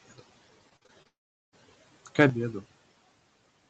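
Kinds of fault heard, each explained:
Repeated packet loss (robotic sound): From 0.69 to 1.07 s the sound turns choppy and robotic. Five short holes, the longest 45 ms, are each patched by stretching the last sound. Roughly a third of that stretch is filled-in sound rather than real audio.
Long network dropout: At 1.07 s the sound continues briefly as a fading buzz, then goes silent for about 0.4 s. It returns at 1.54 s with that part missing. This is likely a long break in the incoming audio stream.
Sudden gain jump: At 2.30 s the level drops abruptly by about 12 dB and stays down to the end. The sound and background noise fall together, with no fade. This likely comes from a digital gain change applied without a ramp.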